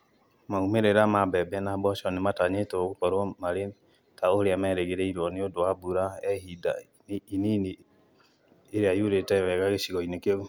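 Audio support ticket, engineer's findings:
Listened through the speech recording and nothing stood out; no findings to log against this ticket.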